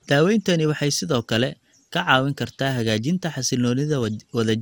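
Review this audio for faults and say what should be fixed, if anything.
The speech sounds swirly, smeared and hollow all the way through, with soft consonant attacks and nothing above 18 kHz. That's likely generation loss: repeated lossy passes, fitting MP2 at around 96 kbit/s re-encoded about five times, each stacking new noise. Keep a lossless master and encode only once, at the end.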